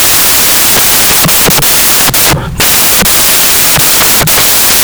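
Throughout, samples built from the wrong bytes make low bits dominant: loud white noise, a dense noisy waveform and flat broadband spectrogram.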